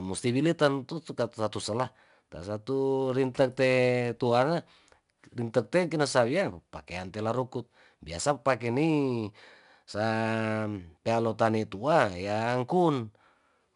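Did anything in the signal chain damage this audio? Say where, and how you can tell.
Yes. 4-bit ADPCM compression at the codec stage runs throughout this speech. A gritty hiss rides on every louder syllable, with nothing above 10.6 kHz. Each sample is coded as a coarse 4-bit step from a prediction, which fits roughly 89 kbps.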